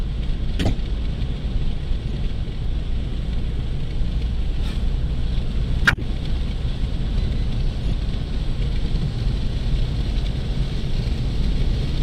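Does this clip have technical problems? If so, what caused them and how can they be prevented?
Yes. Corrupt frames were decoded at 0.59 to 0.72 s, 2.09 to 2.16 s, 5.85 to 6.03 s and 7.81 to 7.93 s. Damaged bits misplaced energy across frequencies, giving chirps, blips or noisy bursts. Most are loud, peaking around -5 to -10 dBFS. Checksums with frame concealment would prevent this.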